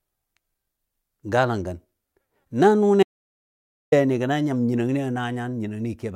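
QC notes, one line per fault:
3.03–3.92 s: audio dropout to silence. Speech cuts out abruptly for 0.89 s of silence with no room tone, likely input lost while recording continued.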